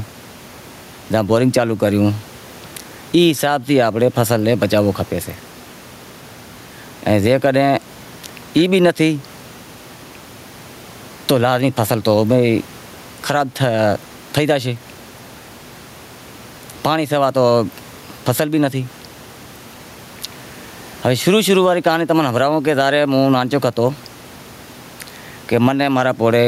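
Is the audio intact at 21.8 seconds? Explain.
No. Gain pumping affects 21.8 seconds, as it does the whole recording. The input gain is likely set far too high, so a fast limiter clamps down on each loud syllable. The room noise sits about 35 dB below the speech, and the gain swings by around 15 dB.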